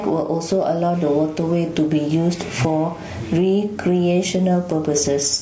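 Throughout this speech recording the level breathes, a swing of around 15 dB. Loud and quiet passages sit unnaturally close together and the delivery sounds squashed. This is gain pumping, likely from input gain set far too high, so a fast limiter or compressor keeps clamping down on each peak and releasing in the gaps; the room noise sits about 41 dB below the speech. The voice is also rough and grainy, with a hiss-like fill between the harmonics and a thin, synthetic upper band below the call chain's 8 kHz ceiling. That points to low-delay AAC compression, AAC-ELD at a low rate, which fits roughly 32 kbps. Its short frames resolve pitch harmonics poorly, so at this bitrate the codec damage is plainly audible.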